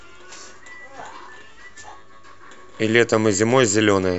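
Listening to this short speech recording, nothing stood out as a technical problem at any point.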